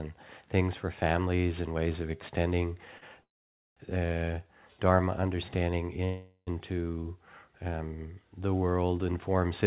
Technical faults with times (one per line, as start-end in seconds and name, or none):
2.98-3.03 short stall from a late packet
3.21-3.78 call audio freeze
6.05-6.49 call audio freeze